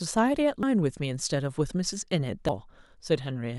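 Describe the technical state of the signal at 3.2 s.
At 3.2 s the signal is intact, with no audible fault at that moment.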